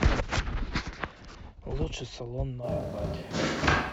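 A short speech clip. At 2.65 s the sound turns roomy and hollow, thinner, about 5 dB quieter, with faint room noise, to the end. Likely a switch to a distant microphone.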